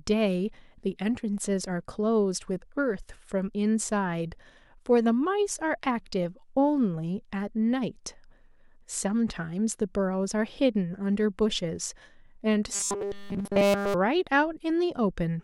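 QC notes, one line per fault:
12.73–13.94 s, robotic sound from repeated short buffers: the speech collapses into a stiff, metallic buzz locked at 200 Hz, still loosely tracing the syllables. The likely cause is incoming audio arriving too rarely, so playback keeps looping the most recent fragment. A 200 Hz buzz fits a 5 ms repeat. For essentially the whole stretch the sound is repeated material rather than new audio, so the actual speech there is lost.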